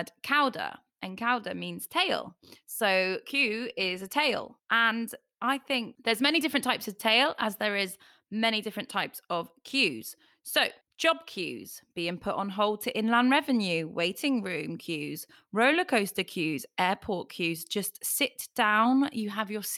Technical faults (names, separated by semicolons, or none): none